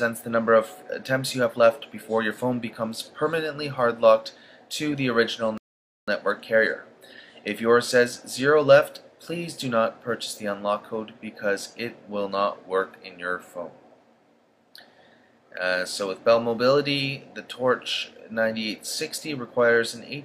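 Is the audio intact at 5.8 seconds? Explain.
No. At 5.8 seconds the audio sits inside a rebuffering stall that runs from 5.58 to 6.08 s. The player used up its downloaded audio and paused until more data arrived, so the sound drops to silence for about 0.5 s and then continues from exactly the point where it stopped. That is what sets it apart from a dropout: no audio is missing, and the playback is simply half a second longer.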